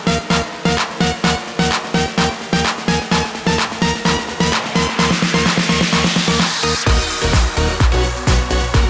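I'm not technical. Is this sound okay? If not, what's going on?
Yes, nothing in this sound is faulty.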